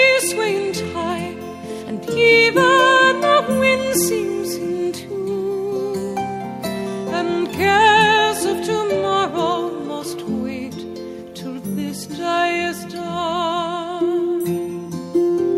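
No technical faults can be heard anywhere in the clip. Nothing along its course calls for a time stamp or a closer look.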